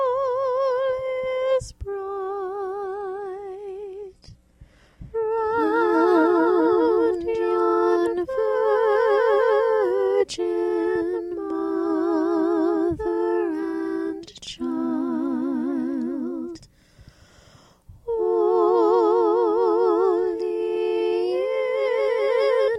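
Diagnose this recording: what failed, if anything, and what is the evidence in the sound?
The failure sits at the network stage, where the player dropped to a lower bitrate in an adaptive stream. From 2.86 s to 6.86 s the audio abruptly loses its top end, with nothing above 12.3 kHz, and takes on a thin, synthetic sheen that points to a low-rate HE-AAC-style encode. It returns just as suddenly to full quality. There is no gap or stutter at either edge, which separates this bitrate switch from packet loss or a buffer underrun.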